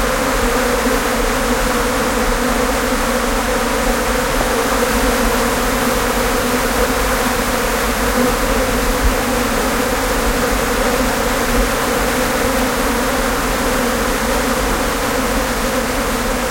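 A ground loop or a nearby mains transformer has coupled the 50 Hz power line into the signal path, and the resulting mains hum runs through the whole recording from start to finish. It sits as a steady low drone at 50 Hz, with some low harmonics stacked above it, at roughly 15 dB below the sounds themselves.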